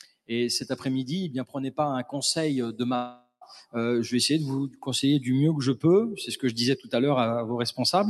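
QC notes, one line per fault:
Throughout: noise suppressor applied to music or sounds. A speech-oriented suppressor treats sustained tones, ambience and reverb as noise and keeps turning them down by about 5 dB. Attacks pass while held material and tails sink, so the level pumps and thins.
0.0–0.3 s, 4.70–4.87 s, 6.78–6.93 s: sound cut by the noise suppressor. Here the suppressor misreads the material as noise and pulls it down further, by up to about 21 dB at the start and about 14 dB and 13 dB later. Each dip lasts roughly 150–200 ms, and steady or decaying parts lose the most.
2.95–3.43 s: gap in the audio, likely from a long network dropout. For about 460 ms nothing new is heard. The last sound is stretched into a fading buzz, then about 110 ms of near-silence follows before the audio resumes with that stretch missing. The 12 kHz top end from the Opus call path stays intact.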